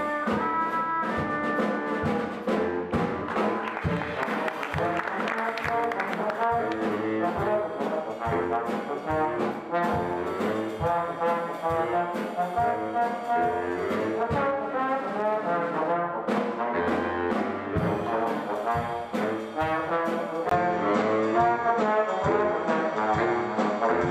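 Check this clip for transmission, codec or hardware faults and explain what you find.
One fault appears near the end. From 20.49 s to the end, the sound turns duller, with nothing above 8 kHz, a level shift of roughly 5 dB, a new noise floor roughly 40 dB below the signal, and a 20 ms silence at the change. The likely cause is an input switched to a poorer device, whose narrower band, gain and noise replace the original's.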